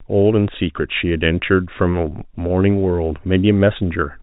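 At 2.48 to 2.50 s there's a packet loss with pitch repetition. About 20 ms of audio went missing, which fits a single lost packet. The receiver covered the hole by repeating the last pitch period, so you hear a brief, slightly held, buzzy smear rather than a dropout. It's short enough that it never fades to silence. The G.711 telephone band around it is capped at 4 kHz.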